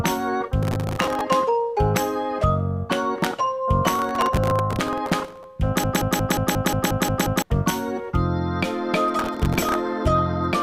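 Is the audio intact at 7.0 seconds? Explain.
No. At 7.0 s the audio sits inside a broken-record loop from 5.84 to 7.42 s, where one 0.18 s fragment repeats exactly, back to back, nine times. A stalled player or stream likely kept resending its last fragment, so the intended audio is lost.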